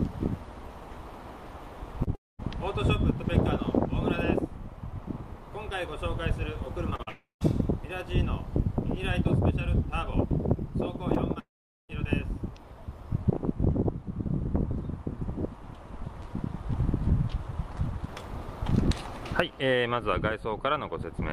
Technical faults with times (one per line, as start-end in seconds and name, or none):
2.03-2.09 short concealed packet loss
2.15-2.40 long network dropout
6.90-7.09 short concealed packet loss
7.09-7.42 long network dropout
11.14-11.96 scattered short gaps
11.39-11.90 long network dropout